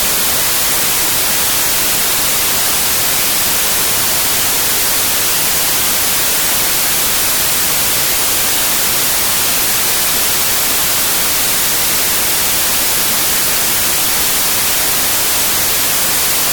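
From the first moment to the end, the sound is buried under loud, hiss-like white noise, the mark of samples built from the wrong bytes. Each sample's bytes are being assembled in the wrong order or from the wrong offset, so the rapidly changing low bits land in the most significant position. Unlike added background hiss, this noise rises and falls with the material itself.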